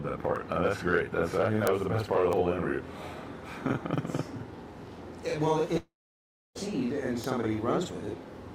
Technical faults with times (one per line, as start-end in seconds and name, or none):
0.00-8.55 channel delay (doubling)
5.77-6.58 long network dropout